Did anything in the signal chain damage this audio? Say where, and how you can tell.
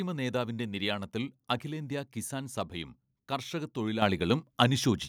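Yes. At 4.02 s the whole signal jumps abruptly louder, by about 8 dB, with the voice and the background noise floor stepping up together in a single instant rather than swelling. This is the microphone volume stepped up at the call-processing stage: the call software judged the input too quiet and raised the device's input gain in one step. The giveaway is that the noise rises exactly with the voice, which rules out the talker simply speaking louder.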